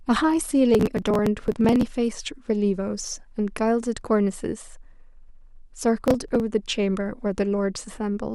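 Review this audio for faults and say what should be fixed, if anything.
A burst of gritty crackle tears through the speech from 0.74 to 1.87 s, and a shorter one from 6.06 to 6.40 s. This is processor overload crackle. The processor repeatedly missed its deadlines for very short audio buffers, each a few milliseconds long. Each miss skipped a buffer and left a tiny hard-edged gap. Dozens of these in the first burst, and about fifteen in the second, run together into the rough tearing. Prevent it by lowering processing load or enlarging the buffer.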